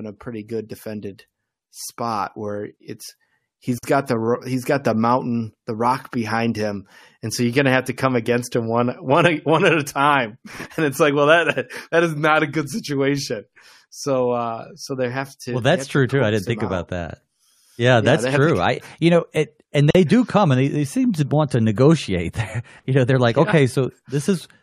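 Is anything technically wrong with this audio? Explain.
Yes, there are two gaps at a join of encoded pieces in this speech, at 3.78 to 3.83 s (about 51 ms) and at 19.91 to 19.95 s (about 42 ms). Separately encoded sections were butted together untrimmed, so encoder start delay and end padding leave short silences with smeared edges before the speech resumes.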